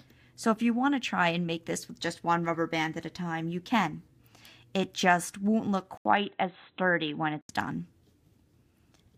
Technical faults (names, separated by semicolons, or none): input switched to a poorer device